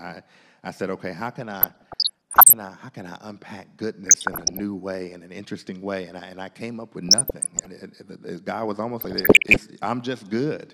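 DAB burbling breaks into the speech four times, from 1.54 to 2.53 s, 4.06 to 4.61 s, 7.09 to 7.66 s and 9.01 to 9.58 s. Bit errors from weak reception, around one percent or less, slip past error correction and corrupt the MP2 sub-band samples and scale factors. The sound picks up short noise blips in single sub-bands, with sub-bands jumping in level. A spectrogram shows isolated horizontal bands flaring for single frame-length blocks, and the waveform shows jagged bursts in level.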